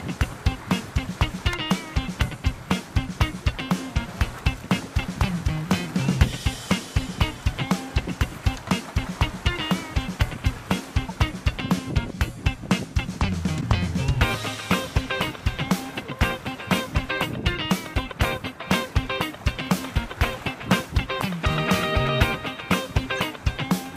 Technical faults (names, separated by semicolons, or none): corrupt frame decoded